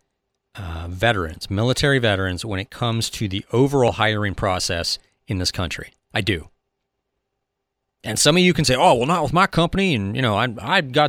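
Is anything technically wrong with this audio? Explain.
Yes. At 3.69 to 3.97 s, compressed frames are skipped. About a tenth of a second of speech is missing. The speech jumps ahead at the join.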